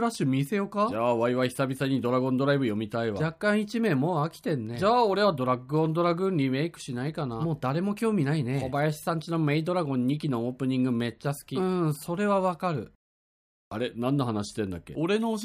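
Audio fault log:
No faults heard anywhere in the recording.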